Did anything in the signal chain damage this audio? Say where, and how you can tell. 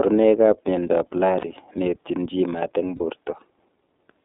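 Yes. Throughout, the speech sounds slightly rough and synthetic, with nothing below about 250 Hz or above 3.7 kHz. This is the iLBC codec at the codec stage: narrowband coding that rebuilds each 30 ms frame's excitation independently, and the plainly audible damage fits its 13.33 kbps mode.

At 1.41 to 1.47 s and 2.96 to 3.01 s, the speech briefly turns into a held, faintly buzzy vowel, then recovers almost at once. These are lost iLBC frames at the network stage: the decoder repeated the last pitch cycle blended with noise over each gap, which fits a single missing 30 ms frame.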